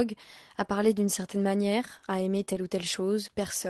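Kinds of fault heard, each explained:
Lost packet rebuilt from error correction: Packets went missing, but the next packet carried a low-bitrate copy of each one. The decoder played that copy, so nothing drops out. The rebuilt audio just sounds rougher and noisier. At 0.63 s, right before "parler d'une certaine manière", a brief 20 ms grainy patch suggests one lost packet. From 2.37 to 2.56 s, just after "d'une certaine manière à", about 80 ms of rebuilt audio points to several separate lost packets.
Short concealed packet loss: Here about 20 ms of audio arrived too late and had no backup copy. The receiver invented a stand-in by extending the sound it had just played, then blended back into the real signal. At 2.45 s, inside the rough stretch after "d'une certaine manière à", this leaves a quick smear or wobble. Roughly 16 ms of that is filled-in sound rather than real audio, so any short sound there may be blurred or missing.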